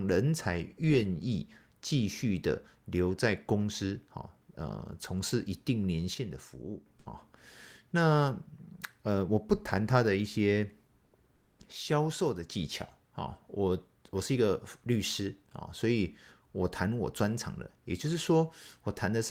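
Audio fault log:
6.14–6.86 s and 11.72–12.50 s, one channel drops out: the whole sound steps down by about 6 dB, with abrupt edges, likely one stereo channel lost before the mono sum. Unlike a gain dip, the level recovers instantly.
11.05–11.13 s and 11.35–11.59 s, comfort noise in place of the background: in pauses, the quiet background, about 42 dB below the loud parts, turns into steady, featureless hiss that is about 2 dB and then about 9 dB quieter, likely Opus discontinuous transmission. Unlike the dropout, only the background changes.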